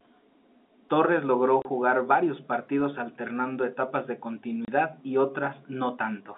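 At 1.62 to 1.65 s, just before "varios partidos alternando etapas", and at 4.65 to 4.68 s, after "partidos alternando etapas de", packet loss filled with silence leaves 30 ms gaps, each fitting one lost packet. The edges are hard. Unlike concealment, nothing is smeared or repeated.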